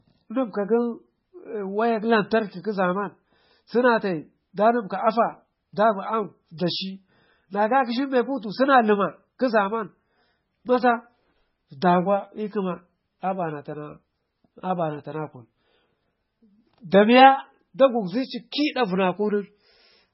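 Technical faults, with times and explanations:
Throughout, MP3 compression: the speech has nothing above about 5.6 kHz, leaving s sounds dull and lisping, and heavy damage gives a watery, swirly texture where weak frequency components flicker in and out between frames. This is likely the work of an MP3 encoder starved of bits, which fits a very low rate of around 16 kbps. It cut the treble at a fixed point and zeroed whatever detail its hearing model judged expendable.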